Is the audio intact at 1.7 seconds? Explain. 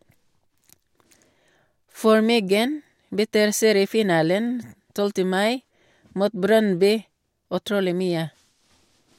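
Yes, the speech at 1.7 seconds is intact, with no dropout, click, distortion or other fault to be heard at that moment.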